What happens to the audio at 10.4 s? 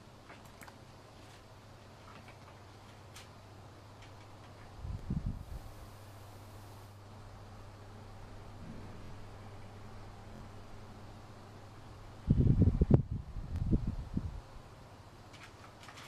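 A repeated buffer occurs from 10.36 to 10.40 s. New audio arrived late, so the playback device looped its last block, a 23.2 ms stretch that fits a 1024-sample buffer, twice more. The result is a quick stutter, and around 50 ms of the real sound never plays. On a waveform the identical segment repeats with abrupt discontinuities at each seam, and a spectrogram shows vertical broadband lines at those joins.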